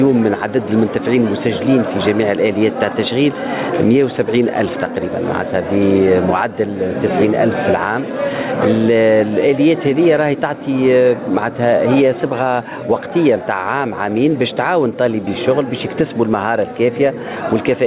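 No technical faults are audible.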